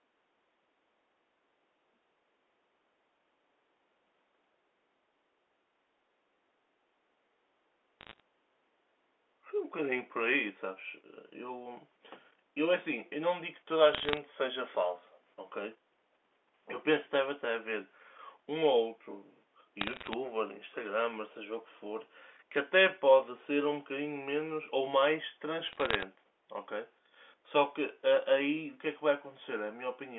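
Bit errors on a digital phone line crackle at 8.01–8.20, 13.94–14.17, 19.81–20.13 and 25.69–26.03 s. Flipped sample bits, around a fraction of a percent, appear as isolated waveform spikes and thin full-band vertical lines on a spectrogram.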